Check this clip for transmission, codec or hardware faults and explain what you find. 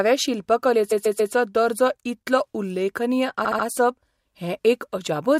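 Repeated frames occur twice in this speech. At 0.91–1.33 s, just before "दर्जो इतलो उल्लेखनीय", a 139.3 ms block replays three extra times. At 3.44–3.65 s, after "दर्जो इतलो उल्लेखनीय", a 69.7 ms block does the same. Each stutters audibly and adds 418 ms and 209 ms respectively.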